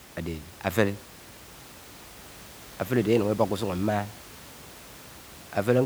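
No technical faults can be heard anywhere in the speech. A steady room noise sits underneath it, about 21 dB below the speech, and belongs to the recording space rather than to the system.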